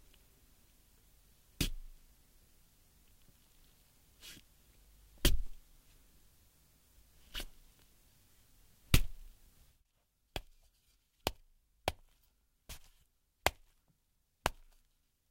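No technical faults can be heard anywhere in this recording of sounds.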